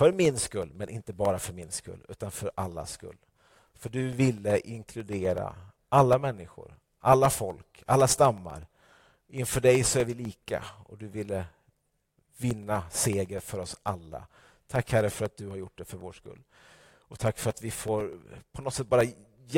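Periodic USB or driver dropouts run from 0.13 s to 19.51 s: every 0.125 s, about a millisecond of the speech drops out to silence as the bus or driver stalls, producing a steady ticking, roughly eight per second, heard only while sound is present.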